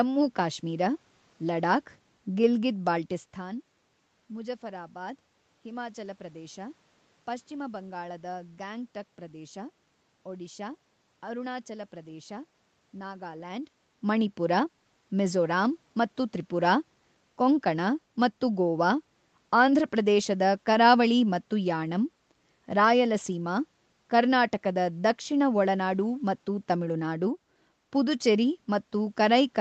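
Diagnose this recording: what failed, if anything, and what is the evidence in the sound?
Nothing in this recording points to a failure at any stage. The sound stops at about 8 kHz, which fits an Opus call path working as intended, and the level shifts near 3 s and 13.5 s come from the talker moving relative to the microphone.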